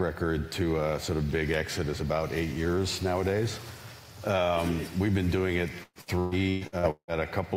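From 5.83 to 7.11 s, repeated packet loss gives a robotic sound. Seven gaps, up to 174 ms, are patched by stretching prior audio. It turns choppy, with pieces missing.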